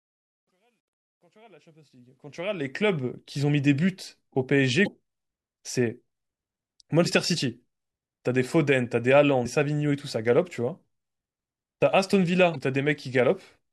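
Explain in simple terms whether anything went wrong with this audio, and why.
Truncation distortion on a fade: the fade-in over the first 3.0 s was made by a digital volume stage that kept too few bits and added no smoothing noise, which fits a 12-bit stage. The quiet start, worst from 0 to 1.7 s, sounds gritty.

Damaged data in a compressed stream: at 0.47, 4.84, 7.02, 9.42 and 12.52 s, bits of the compressed speech were corrupted, so the player lost its place and had to find the next good block. Each spot is a brief chirp or blip, roughly 24 to 40 ms long.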